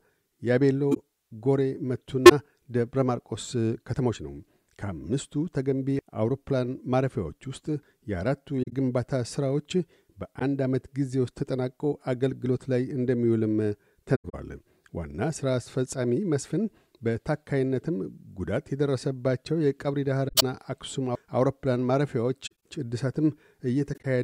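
Damaged AAC frames were caught by the decoder and concealed: it discarded corrupted data and filled each gap itself, by muting it or with a sign-scrambled copy of the last good spectrum. This corrupt frame concealment occurs eight times: 0.91–0.99 s, 2.26–2.32 s, 8.62–8.73 s, 10.39–10.42 s, 14.15–14.35 s, 20.28–20.43 s, 22.46–22.55 s and 23.93–24.05 s. The longest is about 0.2 s at 14.15 s.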